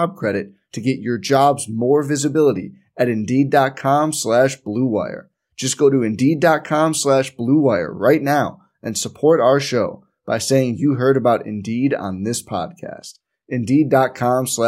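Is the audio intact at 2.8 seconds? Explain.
Yes, at 2.8 seconds the speech plays through intact, with no dropout, click, glitch or other fault audible at that moment.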